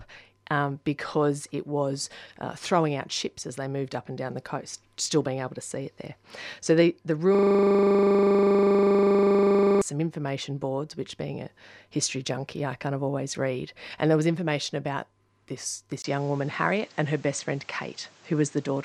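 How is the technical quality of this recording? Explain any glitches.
Two faults disrupt this speech recording: a looping hang in the middle and a change of input quality near the end.

From 7.35 to 9.82 s, right after "the the" and before "some information boards which", a system hang loop occurs. The driver stalled while the hardware kept replaying one 40 ms buffer around sixty times, producing a rough, steady 25 Hz buzz in place of the speech.

At 16.02 s, after "was information about this", a 20 ms dropout marks a change in sound through to the end. The audio turns duller with nothing above 8.7 kHz, and a new noise floor sits about 30 dB down, while the level barely changes. This is likely an input switched to a poorer device.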